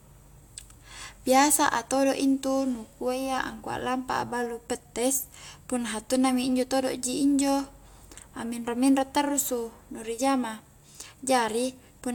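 A recording of speech with no technical fault to report. Nothing in it points to a problem anywhere in the recording or playback chain.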